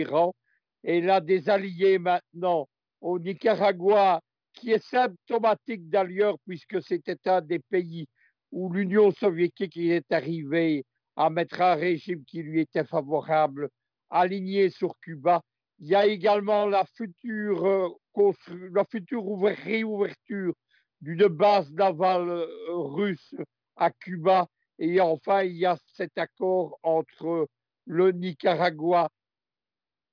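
No audible technical faults anywhere in this recording.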